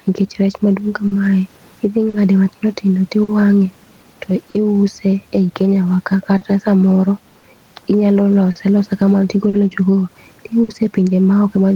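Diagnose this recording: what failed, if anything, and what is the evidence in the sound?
Gain pumping, at the call-processing or analogue front-end stage: throughout the speech, the background swells in pauses and ducks under each loud syllable, a swing of roughly 5 dB. The room noise, about 41 dB below the speech, rises and falls with it. The likely cause is excessive input gain driving a fast limiter. On a spectrogram, the noise floor brightens between phrases. On a waveform, the peaks look flattened.

Clock drift between sender and receiver, in the network or buffer stage: the sender's clock runs roughly 4% slow, so the jitter buffer keeps draining. Small, unevenly spaced timing hiccups recur across the clip where the receiver stretches or repeats fragments. A spectrogram shows brief duplicated slices and smeared onsets.

Scattered short gaps, a network fault: from 1.07 to 4.56 s, right after "nikech rech maduong", about four gaps were concealed, around 150 ms in total. 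From 6.37 to 10.70 s, about five more were filled, around 200 ms. None exceeds roughly 50 ms. Each appears as a short frozen, repeated patch in the spectrogram.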